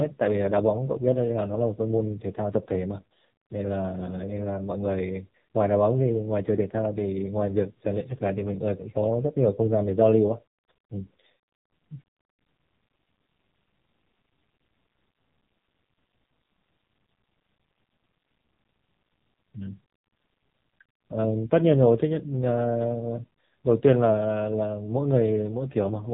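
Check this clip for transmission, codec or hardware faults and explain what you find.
One codec fault runs through the whole recording.

AMR narrowband mobile codec, from start to finish: the speech has been squeezed through a narrowband mobile speech coder that samples at 8 kHz and rebuilds each 20 ms frame from a vocal-tract filter excited by a handful of pulses. Nothing above 4 kHz survives, so sibilants and breath lose their edge. The damage is heavy, with a buzzy, synthetic, robotic quality that points to one of the codec's low modes, around 5.9 kbps.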